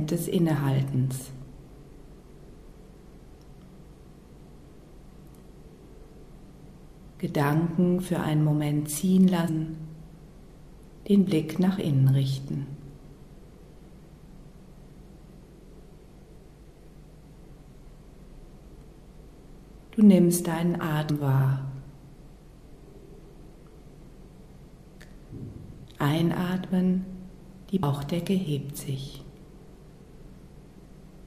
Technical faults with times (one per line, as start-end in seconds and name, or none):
9.48 damaged data in a compressed stream
21.09 damaged data in a compressed stream
27.82 damaged data in a compressed stream